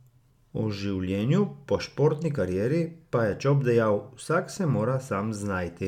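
No technical faults are audible.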